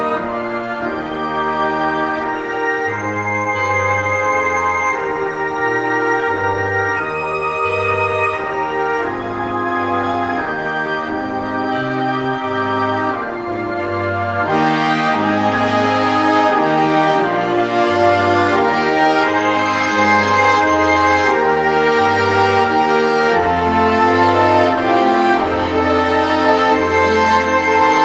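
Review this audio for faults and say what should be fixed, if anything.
Nothing stood out on listening, so there is nothing here that needs fixing.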